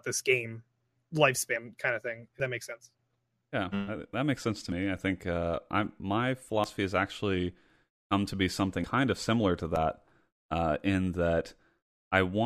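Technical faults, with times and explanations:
1.56, 2.4, 4.72, 6.64, 8.84 and 9.76 s, dropped buffer (overrun): the speech jumps forward, losing about 40 ms each time and nearly twice that at 8.84 s, likely samples overwritten before being read. The waveform shows an abrupt discontinuity and the spectrogram a thin vertical broadband line.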